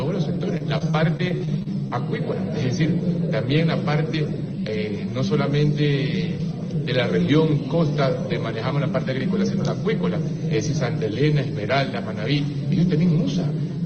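From 0.57 to 1.92 s there is repeated packet loss with a robotic sound. Ten short dropouts, the longest about 29 ms, are each patched by extending the preceding sound, so roughly a sixth of that stretch is synthetic fill, heard as choppy stutter. The call path itself sounds consistent with Opus, with content reaching up to about 12 kHz.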